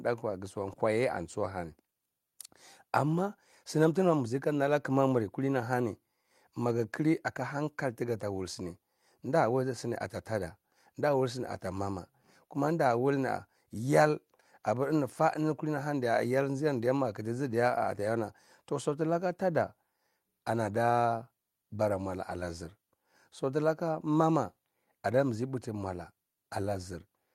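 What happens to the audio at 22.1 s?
At 22.1 s the speech carries on without any dropout, click, glitch or other technical fault.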